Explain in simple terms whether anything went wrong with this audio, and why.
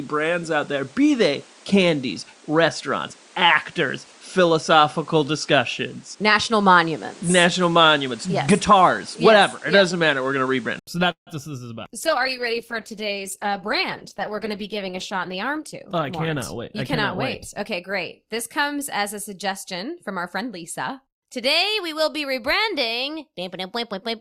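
An input switched to a poorer device from the start until 10.87 s: the sound is narrower, with nothing above 10.5 kHz, likely because a lesser microphone was in use, then a brief silence at the change.

A call audio freeze at 11.11 to 11.30 s, likely from delayed network packets, inserts a pause of about 0.15 s, mostly silent, before the sound resumes with nothing lost.

A call bitrate drop from 12.0 to 18.8 s makes the sound rough and muffled, because the connection weakened and the audio was squeezed into far less data.

A jitter buffer speed-up from 14.52 to 16.12 s runs the sound about 5% faster at the same pitch, trimming roughly a tenth of a second to reduce built-up delay.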